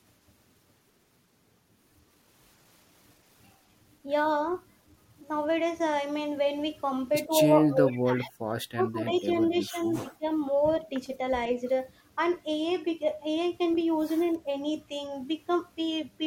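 Speech recording showing speech suppressed in double talk: the level dips at 7.27–7.32 s, 7.52–8.36 s, 8.74–9.27 s and 9.48–10.25 s, falling by up to roughly 25 dB, likely an echo canceller ducking during simultaneous talk. An echo leak appears at 9.14–9.21 s as a faint copy about 25 dB down, delayed 108 ms, likely residual loudspeaker echo the canceller failed to remove.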